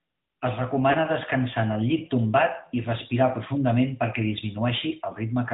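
From start to finish the speech sounds thin and boxed in, with nothing above 4 kHz, and its texture has a plainly audible buzzy, synthetic edge. This is the AMR narrowband mobile codec at 10.2 kbps. The signal is band-limited to a telephone channel and rebuilt from a vocal-tract model driven by sparse pulses. At this moderate rate, too few bits reach the pulse detail to keep the voice natural.

From 0.92 to 0.96 s, just before "descansar en el llit", the speech briefly dips and wavers, then resumes rough for a moment. This is lost AMR speech frames. A frame was corrupted in transmission, and the decoder filled the gap by repeating its last good pitch and vocal-tract settings at reduced gain. The short dropout fits a single lost 20 ms frame, so the sound wavers rather than fading to silence.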